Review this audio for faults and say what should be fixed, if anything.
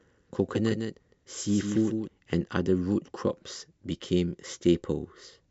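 A doubled audio track runs from the very start of the clip to 2.08 s. A second full-band copy of the speech trails the original by roughly 150 ms, sitting about 5 dB lower. It carries no reverb tail or room colouring and cuts off abruptly at 2.08 s. The likely cause is the same signal being captured twice, once through a slower path, or two misaligned copies left stacked in the edit. Remove the late copy over that span. To prevent it, route each source through a single capture path and check edits for duplicated, offset regions before export.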